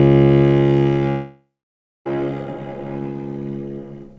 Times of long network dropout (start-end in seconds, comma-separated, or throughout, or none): 1.10-2.07